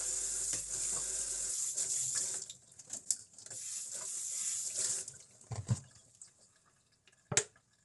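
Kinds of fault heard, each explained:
Low-delay AAC compression: The audio was likely coded with a low-delay codec such as AAC-ELD at a low bitrate, around 32 kbps. Its short frames resolve fine detail poorly, so the sound is plainly rough and grainy throughout, with nothing above 11.6 kHz.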